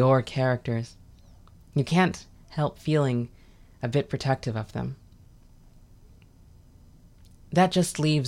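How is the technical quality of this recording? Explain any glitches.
No technical glitches can be heard in the recording.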